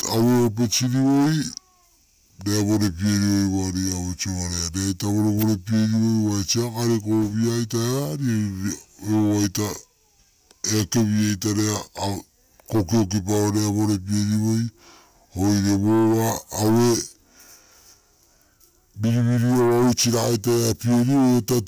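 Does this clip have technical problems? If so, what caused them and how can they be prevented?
Yes, the whole clip suffers from a wrong sample rate: the speech runs at about 0.73 times normal speed and sits roughly 5.5 semitones low, which fits 44.1 kHz audio being played back at 32 kHz with no conversion. Checking that the playback or export rate matches the recording rate, or resampling properly, prevents it.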